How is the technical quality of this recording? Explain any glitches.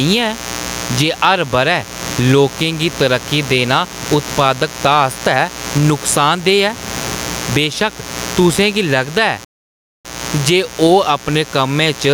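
The recording has three clear technical problems: a constant mains buzz, gain pumping, and one playback dropout.

Mains buzz runs throughout as a steady, raspy tone at around 20 dB below the speech. Sharp switching spikes, such as from a dimmer, rectifier or unshielded cable, enter twice per 60 Hz cycle and produce harmonics extending up to several kHz.

Gain pumping is also present throughout. The gain swings by around 15 dB, leaving the speech squashed and level-flattened. The likely cause is input gain set far too high, with a fast limiter or compressor clamping down on peaks. The room noise sits about 28 dB below the speech.

A playback stall runs from 9.45 to 10.05 s: the sound cuts to silence for about 0.6 s and then resumes. This most likely means the player ran out of buffered data or its audio thread was blocked, leaving the output empty until it recovered.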